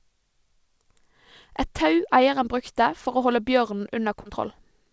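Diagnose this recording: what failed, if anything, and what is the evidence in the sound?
Short concealed packet loss at 4.22 to 4.27 s, a network-stage fault: 40 ms of audio arrived too late, so the receiver stretched the preceding sound for 33 ms and blended back, leaving a brief smear. Nothing sounds above 8 kHz, fitting a wideband call codec.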